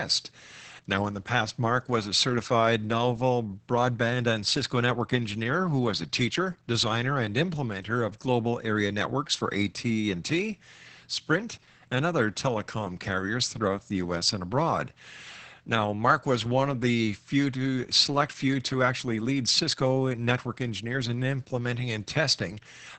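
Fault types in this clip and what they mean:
Opus voice compression: The speech carries the signature of Opus running its SILK linear-prediction coder at a very low rate, which points to roughly 10 kbps. Nothing above about 8 kHz survives, so sibilants and breath detail are cut off in a wideband ceiling. The excitation is coded coarsely, leaving the speech muffled, hoarse and somewhat robotic from start to finish. The damage is heavy and constant across the whole clip.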